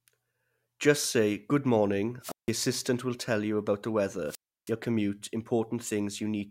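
At 2.21 s, after "say good morning", and at 4.25 s, after "tell you about the", the speech suffers a wireless microphone squelch dropout: the FM signal fades, hiss swells, then the receiver mutes for about 0.16 s and 0.32 s. Unlike a digital dropout, the hiss precedes each silence.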